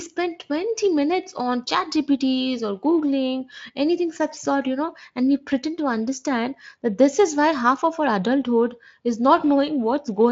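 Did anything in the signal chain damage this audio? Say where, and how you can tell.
No, nothing in the chain has audibly damaged this speech. The only trace of the path is the Speex codec, which leaves nothing above 7.6 kHz and at most a faint colouring, consistent with a high-quality wideband setting.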